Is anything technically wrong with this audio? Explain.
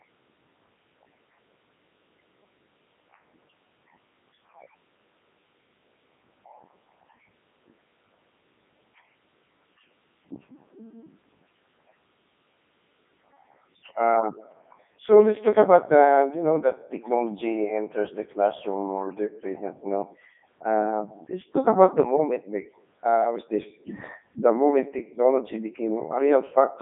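Yes. Throughout, the speech sounds robotic and buzzy, with nothing above 3.6 kHz. This is the Codec 2 vocoder, consistent with its 3.2 kbit/s mode, which rebuilds the voice from sine waves instead of keeping the waveform.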